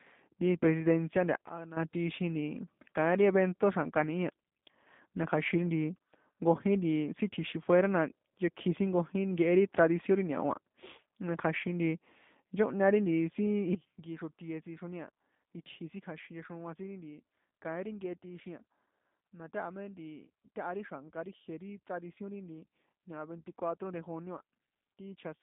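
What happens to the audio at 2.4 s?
G.729 codec damage is present at 2.4 s, as it is across the entire clip. The speech is rebuilt from a vocal tract filter, a pitch predictor and a sparse set of pulses per frame, which fits an 8 kbit/s G.729A stream. The band runs from about 150 Hz to 3.6 kHz with nothing above 3.7 kHz, so the speech sounds muffled and plainly rough, with a buzzy, synthetic edge.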